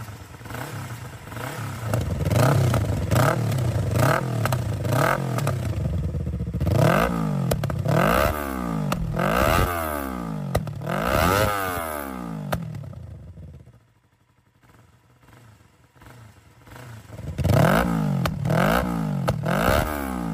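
No technical faults are audible anywhere in this audio.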